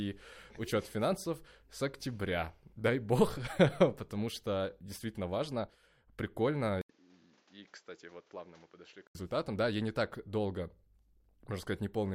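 At 6.81 s the speech drops out for 80 ms, then returns about 10 dB quieter and duller over fresh background noise roughly 30 dB down, likely an input switched to a poorer device. The waveform shows the gap, and the spectrogram is empty above 7.6 kHz until 9.15 s.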